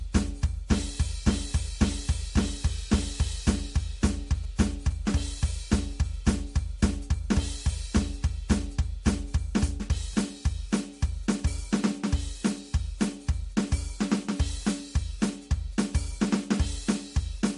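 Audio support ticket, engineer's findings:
Watery, swirling texture across the whole music clip, with weak detail flickering in and out and no treble above 11.2 kHz. Cause is likely MP3 compression at a low bitrate, around 48 kbps. Short of bits, the encoder discards quieter frequency lines frame by frame and low-passes the top end. The damage is plainly audible throughout.

Galloping dit-dit-dit buzz from 4.44 to 5.16 s, about 25 dB below the music, with a 217 Hz buzz tone. These are GSM signalling bursts from a nearby 2G phone exchanging control traffic. The audio circuitry rectifies the radio bursts into the audible pattern.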